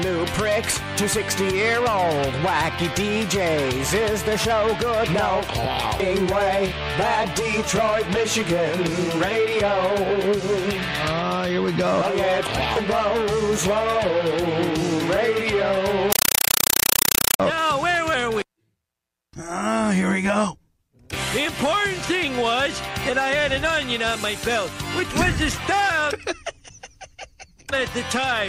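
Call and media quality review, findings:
Compressed stream played as audio, 16.12–17.40 s: loud chattering static; AC-3 data output undecoded. Waveform shows 5.3 ms noise bursts, 31.25 per second, flat silence between.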